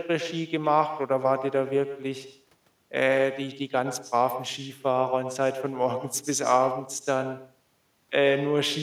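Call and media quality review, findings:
Echo with no canceller, whole clip: speech shadowed by a discrete copy about 11 dB down, roughly a tenth of a second late, thinner. Far-end loudspeaker into microphone, no echo cancellation. Distinct repeat, not reverb's smooth decay.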